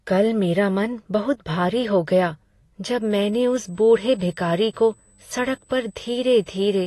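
From the start, the speech sounds dull and smeared, with nothing above 12 kHz. This is likely AAC compression, with damage that fits roughly 32 kbps. From 3.02 s to the end, a faint USB whine sits at a fixed 8 kHz, about 40 dB below the speech, from the bus's 125-microsecond microframes leaking in.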